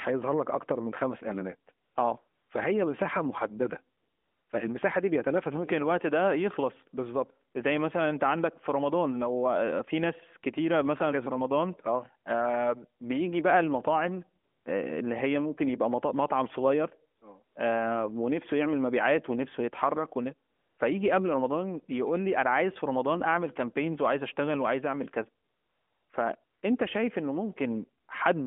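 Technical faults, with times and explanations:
1.8 s to 28.1 s, AMR comfort noise: eleven pauses, from a single 20 ms frame up to the longest of 660 ms at 25.4 to 26.1 s, where the phone's voice activity detector judged the talker silent and stopped sending speech frames. The receiver fills each gap with synthetic noise built from a rough estimate of background level and spectrum, so the real room sound gives way to a smooth, steady hiss that switches in and out within the narrowband AMR telephone band.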